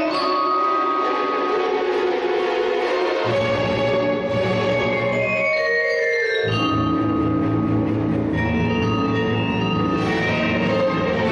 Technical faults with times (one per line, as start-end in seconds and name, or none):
none